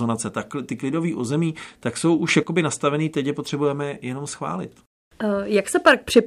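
A gain setting was most likely applied to the digital signal in a single step instead of being ramped in. This produces a sudden gain jump at 2.28 s, right after "klidový území tak jsou". The level leaps up by about 8 dB, the speech and background noise rising together, and holds there until 2.43 s before dropping back, just ahead of "nastavený teď je potřebujeme". The result is a brief, abrupt loud patch.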